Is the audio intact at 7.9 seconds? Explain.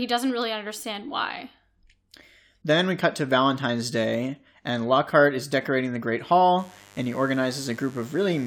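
No. Mains buzz runs from 6.59 s to the end of the clip at 8.47 s, so it covers 7.9 s. Sharp switching spikes at twice the 50 Hz mains rate add harmonics into the kilohertz range, heard as a steady, raspy buzz roughly 30 dB beneath the speech.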